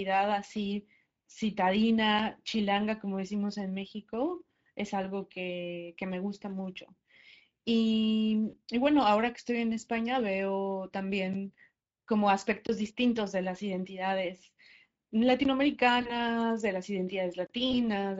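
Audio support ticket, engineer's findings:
Speex codec, whole clip: hoarse, noisy speech. Damage is plainly audible. Cause: CELP coding with too few bits for the excitation signal, so the residual is coarsely approximated. The sound points to a mid-rate Speex mode near 16.8 kbps. Component: the speech encoder in the call path. Fix: raise the quality setting or switch codecs.

VoIP packet loss concealed by the speech codec, 8.49–8.56 s: the voice smears into a fading buzzy tone or coloured noise and stays weak briefly after. The gap fits two lost 20 ms frames. Cause: the decoder repeats its last pitch and filter with falling gain, and recovery lags because each frame builds on the previous one.
Same fault at 16.01–16.12 s, also fitting two lost frames, about 40 ms.
Same fault at 17.71–17.75 s, fitting one lost 20 ms frame.
Component: the network/jitter path feeding the decoder.

Block of digital silence, 11.33 s: tick, about a 9 ms gap.
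Same fault at 12.67–12.69 s: short hole of about 23 ms, which fits a 1024-sample buffer.
Same fault at 15.44 s: about 12 ms dropout, which fits a 512-sample buffer.
Same fault at 17.47–17.50 s: hole of about 31 ms.
Cause: likely the output buffer was not filled in time, so the audio cut out with no fade. Component: the playback/audio callback.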